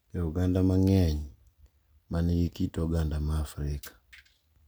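No technical faults can be heard anywhere in the recording; the speech signal stays continuous and undisturbed throughout.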